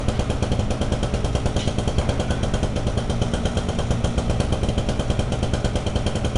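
From start to finish the audio carries the mark of 4-bit ADPCM compression. Each sample is coded as a coarse 4-bit step away from a predicted value, with the step size adapting on the fly, so the error rides along with the signal as a gritty hiss that swells on every loud passage and roughens sharp attacks. Nothing reaches above about 10.6 kHz, which points to a rate around 89 kbps and leaves the top end noticeably dull.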